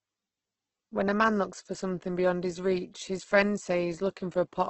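Opus compression throughout: the speech sounds rough and grainy with nothing above 8.2 kHz, likely from heavy music-mode coding at roughly 12 kbps.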